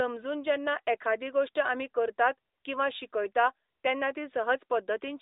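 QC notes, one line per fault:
Nothing to log here: the speech just comes through the usual AMR narrowband mobile codec at 12.2 kbps, so it sits in the familiar phone band of 300 Hz to 3.7 kHz, and there's no fault to note.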